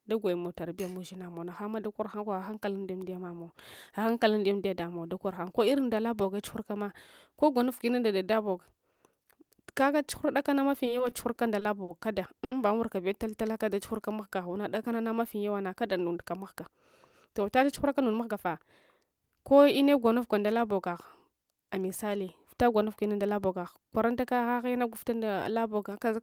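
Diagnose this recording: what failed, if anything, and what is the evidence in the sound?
The network side is where it goes wrong, starting with repeated stalls (stutter) from 10.85 to 11.90 s. Packets arrived late six times, and the receiver bridged each gap by extending the last sound, 130 ms in total with the longest gap at 50 ms. Nothing drops out, but the speech drags and catches.

Right after, at 12.44 to 12.53 s, there's a short stall from a late packet. The buffer ran dry, the receiver held the sound for 70 ms until the packet turned up, and playback delay grew by 70 ms.

Then a jitter buffer slow-down runs from 13.24 to 14.94 s. To rebuild its reserve, the receiver repeated single pitch periods and bits of pauses, adding 141 ms. The speech plays at 92% speed at the same pitch, so it sounds drawn out.

Later come two jitter buffer speed-ups, at 17.29 to 18.56 s (108%) and 19.04 to 19.68 s (110%). 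Once excess audio had built up, the receiver trimmed short pitch-period pieces, roughly 100 ms and then about 70 ms. The speech sounds hurried but keeps its pitch.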